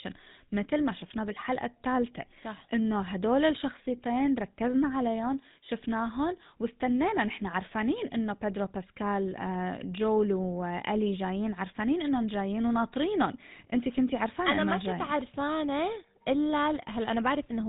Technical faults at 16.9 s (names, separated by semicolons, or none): GSM full-rate codec